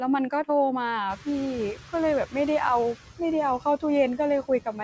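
From the start, the background noise sinks in the gaps between phrases and swells back under the speech. These are noise suppressor artifacts. The suppressor treats steady noise as something to remove band by band, frame by frame, pulling it down by about 10 dB.

At around 1 s the room noise jumps by about 24 dB, and from 1.09 to 1.79 s it comes through louder before settling down. This is the noise suppressor catching up. Its noise estimate was tuned to the quieter room, so for about 700 ms it reduces the new noise by only about 7 dB. As the estimate adapts, the noise sinks back, ending about 15 dB below the speech. The whole clip also has the muted top end of a call path, with nothing above 8 kHz, which fits a G.722 wideband link.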